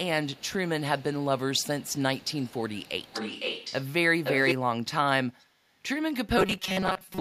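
A faint delayed copy of the speech trails it by about half a second from 0.25 to 0.53 s, grows strong from 0.98 to 3.86 s, is as loud as the speech itself from 4.24 to 4.55 s, and is barely audible from 5.39 to 5.46 s. This is echo leak, likely from a far-end loudspeaker whose echo canceller let its pickup return. From 6.38 s to the end the speech becomes a rigid metallic buzz at 188 Hz. This is robotic sound from repeated short buffers, likely caused by repeating roughly 5 ms chunks that replace about half of the audio.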